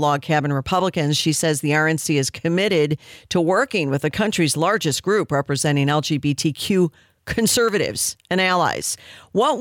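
A speech clip with a bit error spike at 2.18 s: one flipped bit corrupts a single sample, producing a brief, broadband tick peaking at about -23 dBFS.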